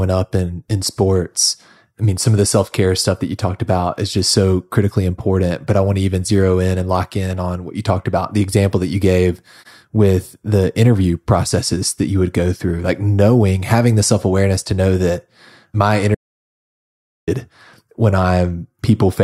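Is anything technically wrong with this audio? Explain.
Yes. From 16.15 to 17.28 s the speech cuts to silence with no room tone for about 1.1 s, an audio dropout to silence, likely from lost input while recording continued.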